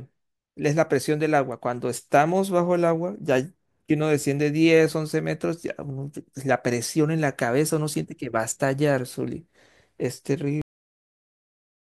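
At 10.6 s the speech has a cut-off end: the final buffers were never written, so audio stops mid-sound and drops straight to digital silence without decay.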